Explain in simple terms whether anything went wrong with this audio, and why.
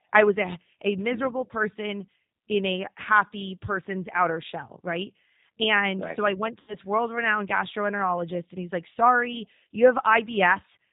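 The speech sounds rough and a little robotic throughout, and somewhat muffled, as though heard down a phone line. That comes from the G.729 codec, a low-rate phone-call codec that doesn't send the sound itself. It sends a compact description of the voice, and the receiving end rebuilds speech from it. Everything above 4 kHz is discarded, which removes the crisp, airy part of the voice, and the rebuilding leaves the plainly audible synthetic edge.

Just after "right so I went", from about 6.60 to 6.76 s, the voice briefly smears into a stretched sound that fades before "world renowned gastroenterologist and" comes back. This is VoIP packet loss concealed by the speech codec. Around 80 ms of audio never arrived, so the decoder guessed by repeating and fading the last bit of voice it had. Because each piece is built on the one before, the voice takes a moment to sound right again after the audio returns.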